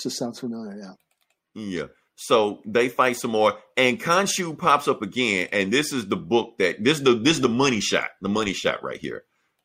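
No technical faults turn up anywhere in this speech recording.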